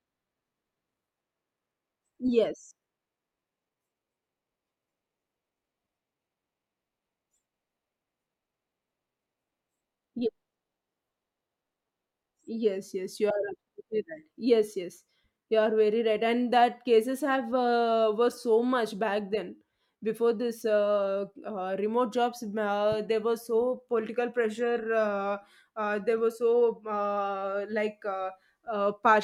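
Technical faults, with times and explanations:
No technical faults can be heard anywhere in this speech recording. There is nothing in the audio to mark with a time or explain.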